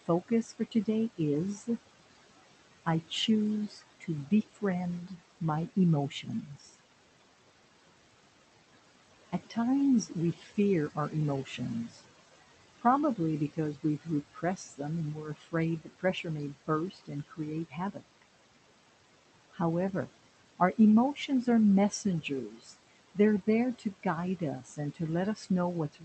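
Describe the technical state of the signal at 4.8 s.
At 4.8 s the speech sounds swallowed and faint in places, with soft consonants and word endings dipping out while the background sinks with them. This is speech cut by the noise suppressor, active from 2.85 to 5.18 s. The suppressor mistook parts of the speech for steady noise and turned them down along with it, by about 13 dB at the deepest point. The losses are brief and add up to a few tenths of a second across that stretch.

Under this moment, as across the whole clip, the background pumps: it drops away between phrases and swells back beneath the speech. These are noise suppressor artifacts. The suppressor estimates the steady room noise, which sits about 16 dB below the speech, and attenuates each frequency band it judges to be noise, frame by frame, by about 17 dB.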